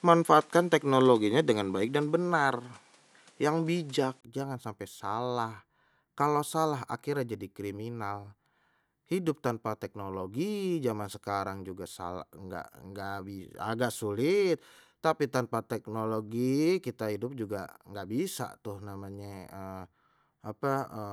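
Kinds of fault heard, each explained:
Input switched to a poorer device: for the first 4.23 s the speech sounds duller and boxed-in, with nothing above 11.7 kHz, a background noise sitting well below the speech, and a level roughly 5 dB different. A silence of about 20 ms marks where the sound opens up into a fuller, clearer character. This likely comes from the recording starting on a more limited microphone or headset input before changing to a better one.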